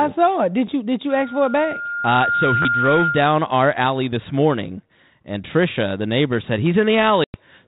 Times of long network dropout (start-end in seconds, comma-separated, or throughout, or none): none